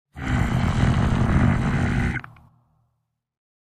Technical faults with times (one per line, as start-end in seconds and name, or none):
2.47 compressed frames skipped